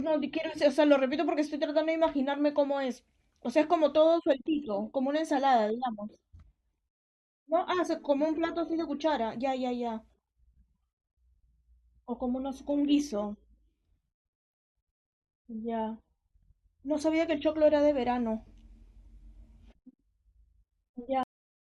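At 21.23 s the speech stops abruptly in the middle of a sound and falls straight to digital silence, with no natural decay or room tail. This is a cut-off end: the final buffers of audio were never written or played out.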